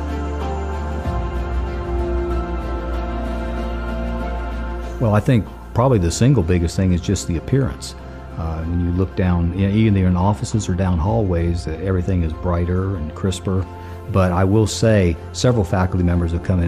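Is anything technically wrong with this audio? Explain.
No, there is nothing technically wrong with this audio. No fault can be heard anywhere in the recording.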